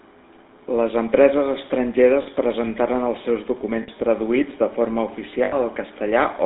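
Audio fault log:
throughout: GSM full-rate codec. The speech is confined to a phone band of about 200 Hz to 3.7 kHz. The coder models the vocal tract and drives it with a regular pulse train, keeping only one in three excitation samples. That thin excitation makes the voice buzzy and gravelly. The damage is plainly audible. The sound fits the old 13 kbps GSM full-rate coder.
2.22 to 2.27 s, 3.82 to 3.89 s, 5.44 to 5.56 s: lost GSM frames. Three short dropouts last 40, 60 and 80 ms. Each fits two, three and four missing 20 ms frames. The gap is filled by reusing the last good frame's settings. So the voice briefly holds as a rough, metallic ring. The longest gap is too short to fade to silence.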